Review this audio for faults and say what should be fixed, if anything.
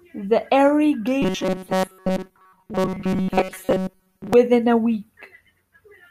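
Robotic sound from repeated short buffers, from 1.22 to 4.33 s. New audio was likely arriving too seldom, so playback kept replaying the last short buffer, about 5.3 ms long, while most of the real speech in that span was skipped. Those back-to-back repeats impose a fixed 188 Hz buzz, so the voice turns into a rigid, metallic buzz that only loosely tracks the words. To prevent it, give the audio path enough buffering and scheduling headroom that fresh samples always arrive before playback runs dry.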